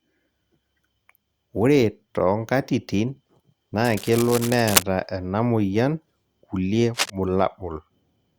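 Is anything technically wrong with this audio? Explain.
Yes. Cable scratch noise appears from 3.84 to 4.83 s and 6.94 to 7.10 s. A worn connector likely shifted, adding harsh rustling bursts nearly as loud as the speech.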